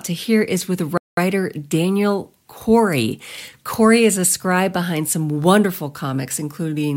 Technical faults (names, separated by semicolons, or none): playback stall